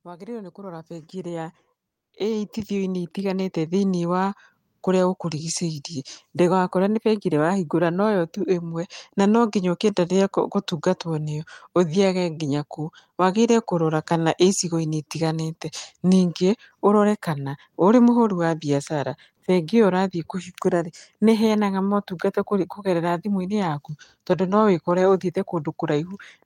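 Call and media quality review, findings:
Automatic gain rising, 0.05 to 5.91 s, ending just before "ndũgakore nĩ bengi ĩrĩa". Capture-side AGC judged the input too quiet and ramped gain by about 16 dB over nearly six seconds. Voice and background swell together.

Comfort noise in place of the background, 1.87 to 2.13 s (260 ms). The real background, already very faint at about 65 dB below the loud passages, drops out and is replaced by steady, featureless hiss about 7 dB quieter. Likely Opus DTX suppressing the pause, with the receiver synthesising filler noise.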